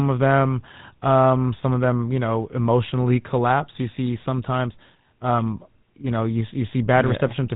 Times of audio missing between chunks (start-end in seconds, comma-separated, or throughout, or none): none